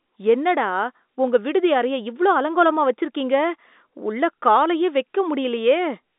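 The speech comes through an ordinary telephone channel, sounding like G.711 A-law coding, with its content held between roughly 250 Hz and 3.7 kHz and nothing above about 3.8 kHz, and no technical faults can be heard.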